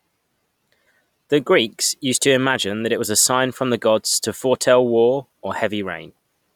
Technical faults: none

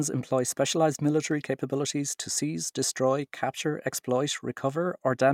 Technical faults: none

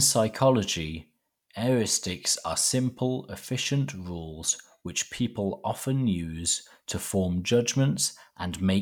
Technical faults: none

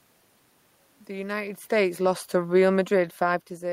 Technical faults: automatic gain falling

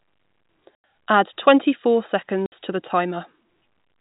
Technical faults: packet loss filled with silence

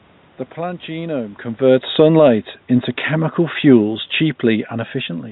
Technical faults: automatic gain falling

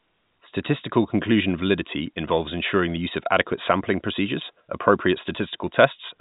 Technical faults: electrical switching spike

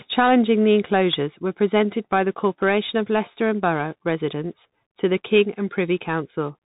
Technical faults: Bluetooth CVSD headset codec

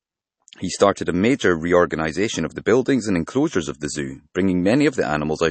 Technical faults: MP3 compression

